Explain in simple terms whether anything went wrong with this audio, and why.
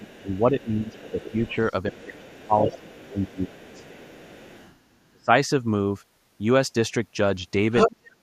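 The talker's voice keeps sinking and thinning out, in four stretches: from the start to 1.58 s, from 1.9 to 4.28 s, from 4.92 to 5.3 s, and from 7.88 s to the end. In the first two it dips noticeably; in the last two it almost disappears. This is speech suppressed in double talk. Both people were likely talking at once, and the echo canceller, unable to tell the talker from the loudspeaker sound, turned everything down.

A second, fainter voice sits underneath the talker from the start until 4.79 s, and then briefly jumps out louder than the talker between 7.76 and 7.9 s. This is the other side's voice leaking through. The talker's device plays the far end on a speaker, and the microphone picks it back up. The likely reason is that the echo canceller didn't strip all of it out, so scraps of that voice slip into the recording.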